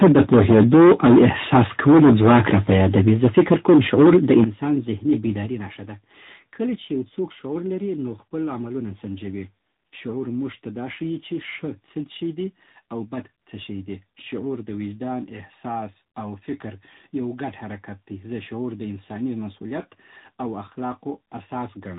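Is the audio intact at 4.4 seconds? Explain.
No. At 4.4 seconds the speech sits on the boundary between two faults, with a third running underneath.

From 0.01 s to 4.44 s there is microphone overload. Peaks are driven about 14 dB past full scale, so roughly a fifth of the samples have their tops sheared flat. That gives the loud syllables a harsh, crackly edge, most likely from an input gain set too high. Unlike codec roughness, this grit comes and goes with loudness, so it is the peaks that break up.

At 4.44 s the microphone volume is stepped down. Voice and background drop together by about 11 dB in a single instant, and the clipping stops. This is likely the call software lowering the input gain after detecting the overload. An automatic gain control would glide to the new level over a fraction of a second. Here the change is a sharp step, landing exactly where the distorted stretch ends.

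The whole clip also carries tandem speech coding. The sound passed through two speech coders in a row. The chain fits an ADPCM stage followed by an AMR narrowband stage at around 10 kbit/s, with a telephone-rate link between them. Each coder reworks the errors left by the one before, so the result is more muffled and warbly than a single coder would make it, with nothing above 3.8 kHz. This degradation stays constant across the clip, unlike the overload, which comes and goes with loudness.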